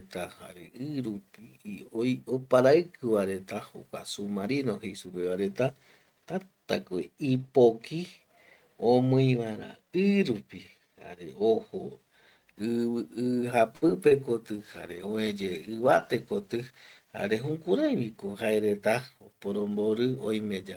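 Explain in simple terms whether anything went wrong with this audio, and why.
At 13.75 to 13.84 s, the speech briefly hangs on one sound, stretched for about 66 ms with a slight buzz or dip. This is a short stall from a late packet: a chunk of the call arrived late, so the receiver held the last sound until it came, then carried on without losing anything.

Just after, at 13.88 to 13.91 s and again at 14.09 to 14.21 s, there are tiny smears or wobbles. These are short concealed packet losses. Small pieces never arrived in time, so the receiver invented a stand-in by extending the previous sound, then blended back into the real audio. The second one also added a slight extra delay of around 20 ms.

From 14.56 to 17.96 s, the voice turns rougher and duller, at its worst for about 2.6 s, before clearing up again. This is a call bitrate drop. The connection seemed to have less room, so the sound was squeezed into far less data, which costs detail and the crisp high end.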